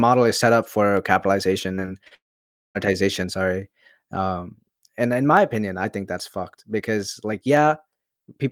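Speech, with three separate faults. From 0.97 s to 7.57 s, roughly four clicks arrive at a steady 2.21 s spacing, each a tiny jump of only a few samples. These are clock drift buffer slips, likely from two clocks disagreeing by roughly 70 ppm. Their strict regularity sets them apart from network damage. Between 1.75 s and 2.13 s, repeated packet loss produces a choppy, robotic stretch: four short holes, the longest 31 ms, patched by stretching the preceding sound so that about a quarter of that span is synthetic. Right after, from 2.15 s to 2.77 s, a long network dropout is the likely cause of about 0.6 s of lost audio. A brief concealment tail gives way to roughly half a second of silence, unlike the rapid-fire gaps just before it.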